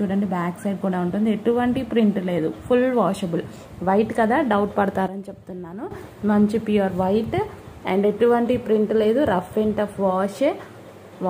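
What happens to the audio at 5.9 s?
At 5.91 s the audio jumps back up to its earlier level, ending a stretch that began at 5.08 s in which the sound and its background noise dropped together by about 12 dB. This is a sudden gain jump. The step up and the step down each happen from one sample to the next, with no fade in between. The likely cause is a digital gain setting or bit shift being applied and then removed without any ramp.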